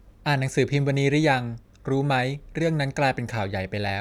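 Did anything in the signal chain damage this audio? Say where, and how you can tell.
No, nothing in the signal chain damaged this audio.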